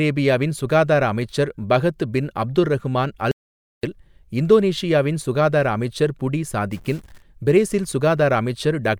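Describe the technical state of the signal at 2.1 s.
At 2.1 s the speech signal is intact, with no audible dropout, distortion or other fault.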